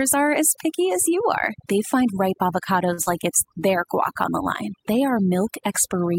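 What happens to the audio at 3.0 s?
Just after "find ripe", a late packet emptied the jitter buffer from 2.93 to 3.00 s, so the receiver held the last sound for about 46 ms, a brief held sound with nothing lost. From 3.02 to 3.09 s, a burst of packet loss follows: about 60 ms of audio never arrived, and the receiver filled the gap by continuing and fading the last sound before jumping ahead. Throughout, overdone noise removal cuts quiet bands it mistakes for noise, leaving near-silent, twinkling gaps.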